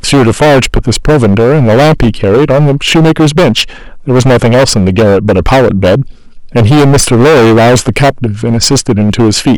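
Speech runs through the whole clip with hard clipping from start to finish. The signal is driven about 17 dB past what the chain can pass, so nearly a third of the samples are clipped flat. Every loud syllable turns into harsh fuzz. On a waveform the peaks appear as flat plateaus. A spectrogram shows smeared harmonic energy stretching up into the high kHz range wherever the level rises.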